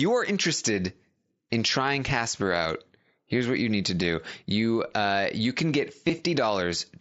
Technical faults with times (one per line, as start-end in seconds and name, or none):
0.75 concealed Bluetooth headset packet loss
6.08 concealed Bluetooth headset packet loss